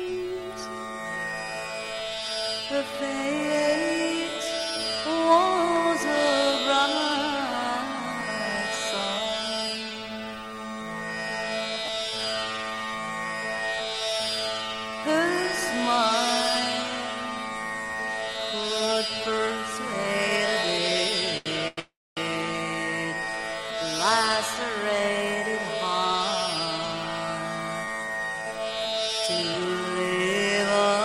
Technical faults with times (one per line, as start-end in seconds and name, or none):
11.86-11.88 chunks out of order
12.77-12.82 loose connector crackle
21.37-21.79 short stall from a late packet
21.79-22.19 call audio freeze
27.86-29.69 jitter buffer speed-up